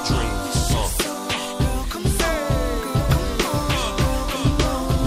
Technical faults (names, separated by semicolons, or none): doubled audio track